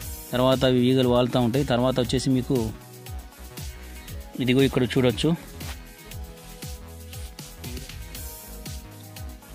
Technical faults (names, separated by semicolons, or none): none